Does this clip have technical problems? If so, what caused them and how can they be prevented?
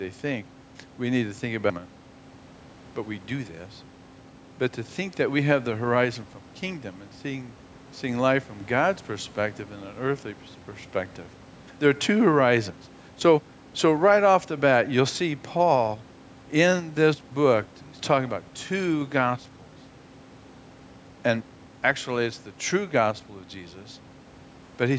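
No, there are no technical problems in this speech clip, so nothing needs preventing. The call's microphone processing leaves nothing above 8 kHz, and the room's background noise sits about 28 dB below the speech.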